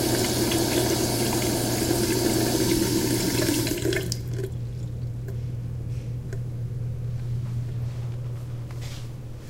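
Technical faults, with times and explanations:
No technical faults can be heard in these sounds.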